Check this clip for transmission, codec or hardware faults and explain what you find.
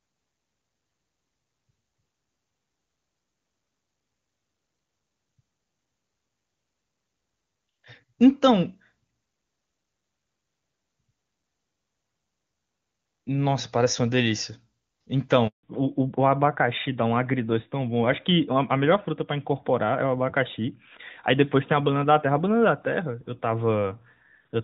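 There are two faults, both around 15.5 s, and they're linked: a dropout followed by a drop in audio bandwidth.

First there's a handover gap from 15.47 to 15.63 s. The call switched networks, and for about 160 ms no speech frames came through. The speech cuts off quickly, sits in dead silence, and whatever was said in that stretch is simply gone.

Right after, from 15.63 s to the end, there's a fallback to narrowband. Before the switch the call was HD Voice on AMR-WB, and the faint codec texture fits a top rate around 23.85 kbit/s. After it, everything above 4 kHz is missing, which points to AMR-NB at 12.2 kbit/s. The speech sounds duller, boxier and rougher.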